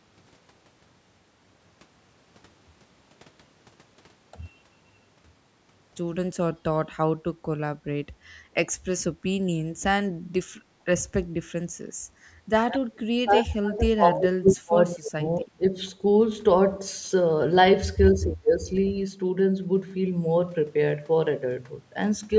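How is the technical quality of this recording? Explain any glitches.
The recording, a speech clip, has several echo-canceller glitches clustered between 10.6 and 18.9 s. The audio carries nothing above 8 kHz, consistent with call microphone processing.

Background gated by the echo canceller, 10.62 to 10.81 s: while the loudspeaker played, the canceller clamped the microphone, so the room sound dips by about 14 dB for roughly 150 ms before springing back as the canceller releases.

Speech suppressed in double talk, 12.69 to 15.22 s, 15.38 to 15.64 s and 18.13 to 18.68 s: the voice sinks and breaks up in pieces, deeply in the first stretch and less in the two shorter ones. The likely cause is simultaneous talking, which left the canceller unable to separate voice from echo.

Echo leak, 18.76 to 18.91 s: a faint, brief copy of the voice arrives 233 ms late, well below the speech level. It is likely residual loudspeaker pickup that the far end's canceller failed to remove and sent back.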